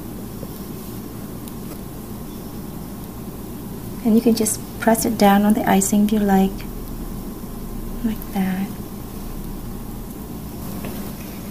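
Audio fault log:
1.70–1.73 s, damaged data in a compressed stream: a brief glitch as corrupted frames confuse the decoder until it resyncs, unlike a clean dropout's plain silence.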